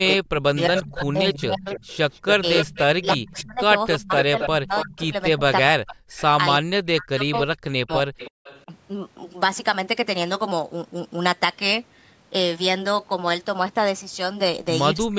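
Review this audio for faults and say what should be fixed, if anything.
Speech suppressed in double talk at 0.2–1.67 s, 2.32–6.0 s, 6.59–8.7 s and 15.07–15.18 s: the voice dips by up to roughly 40 dB, likely because an echo canceller ducked everything while both sides spoke. Unlike a network dropout, the gaps follow overlapping talk. The fix is to tune the canceller's double-talk detection so it attenuates only the echo path.

Echo leak from 0.6–5.08 s, with a 275 ms delay at about 5 dB below the speech, then brief scraps at 6.16–6.23 s, 7.34–7.40 s and 8.18–8.63 s, with a 321 ms delay at about 20 dB down. This is likely loudspeaker pickup the canceller failed to remove. Its distinct, late repeat separates it from room reverberation. Using a headset or improving echo-canceller convergence would prevent it.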